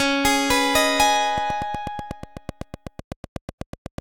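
From 1.38 s to 3.99 s a train of clicks runs over the sound: about twenty sharp, near-identical ticks at a steady 8.06 per second, peaking a few decibels above the programme and audible through quieter moments too. The likely cause is a repeating pulse from nearby equipment or a faulty connection or power supply. On a waveform they show as evenly spaced narrow spikes. A spectrogram shows regularly spaced thin vertical lines spanning the full frequency range.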